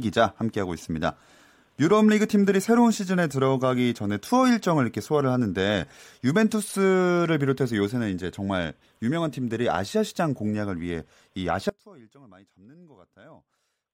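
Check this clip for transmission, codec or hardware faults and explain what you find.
One fault is present. An audio dropout to a faint residue runs from 11.69 s to the end. The speech signal was likely lost upstream while the path after the break stayed live. The speech cuts off abruptly, leaving only faint sound roughly 25 dB below its normal level. It is not a pause or fade.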